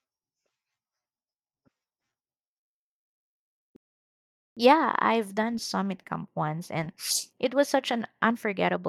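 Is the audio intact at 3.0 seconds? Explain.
Yes, the audio is intact at 3.0 seconds, with no dropout, click, distortion or other fault at that moment.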